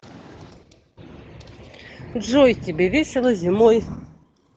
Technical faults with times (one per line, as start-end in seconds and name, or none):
0.00-4.57 Opus voice compression